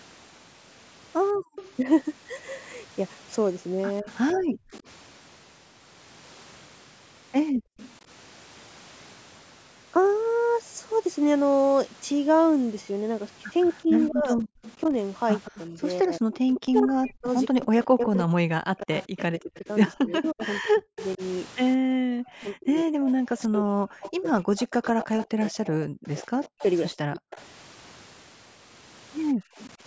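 Background gated by the echo canceller first appears from 1.38 to 1.55 s. While the far end's loudspeaker was active, the canceller pulled the microphone down by about 40 dB, so the room tone briefly vanishes and then snaps back. Echo leak begins at 1.4 s and lasts to 7.93 s: a faint copy of the talk trails the original by 165 ms, roughly 20 dB down, heard as a delayed ghost. It is likely residue that the loudspeaker side's canceller failed to remove and sent back. Speech suppressed in double talk runs from 1.83 to 4.64 s. While both sides speak, the voice dips by up to roughly 35 dB in short bites totalling under half a second, likely because the canceller mistook it for echo and turned everything down. A second gating dip of about 40 dB hollows out the background from 7.52 to 7.77 s. The echo leak returns from 13.62 to 29.7 s, now 181 ms behind and only about 15 dB below the speech, which makes it more plainly audible as a delayed double. 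Overlapping it, from 13.84 to 27.38 s, double-talk suppression chops the voice repeatedly for around 7 s in total, with drops approaching 40 dB. A final gating dip of about 25 dB thins the room sound from 29.34 to 29.57 s.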